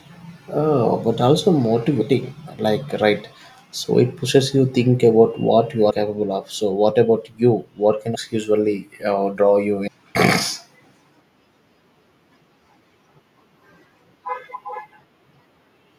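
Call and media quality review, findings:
Compressed frames skipped, 2.00 s, 5.89–5.91 s, 8.14 s, 9.86 s. Speech jumps forward by roughly 150 ms, 70 ms, 300 ms and 400 ms, each a whole number of 26.1 ms frames (about 5, 3, 10 and 15). Probable component: decoder input, with frames missing or rejected as damaged. Joins are short smeared blips, not hard clicks, because the surviving frames overlap across the gap. Longest losses, at 8.14 s and 9.86 s, drop chunks of speech.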